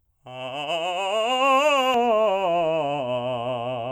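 From 1.94 s to the end, the music turns dull and muffled: de-emphasis applied wrongly. A treble-cut curve meant to undo pre-emphasis acts on audio that needs none, sloping smoothly down to about 11 dB lower at 10 kHz than at 1 kHz. A spectrogram shows the upper bands fading progressively from that point.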